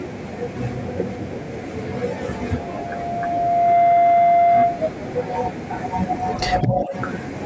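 Loudspeaker feedback squeal runs from 2.22 to 4.92 s. The microphone is picking up the loudspeaker it feeds, and the loop gain passes unity at 693 Hz. That single tone swells over about a second and a half until it sits roughly 10 dB above the speech, then stops.

Speech suppressed in double talk occurs from 6.62 to 6.94 s, where the voice dips by up to about 10 dB. The likely cause is the echo canceller, which mistook the talker for loudspeaker echo while both sides spoke and turned the talker down along with it.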